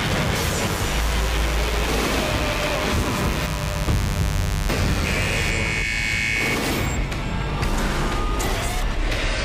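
From the start to about 5.51 s there is a mains buzz: a steady, raspy rasp under the sound, about 10 dB below it. Sharp spikes from a rectifier, dimmer or poor shielding leak into the signal path twice per 50 Hz cycle, so the buzz repeats at 100 Hz and carries harmonics of 50 Hz far up into the kilohertz range. A spectrogram shows a tall comb of evenly spaced horizontal lines that stops abruptly at 5.51 s.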